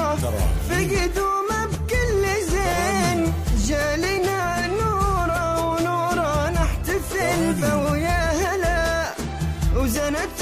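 Nothing stood out as a technical problem on listening to this clip.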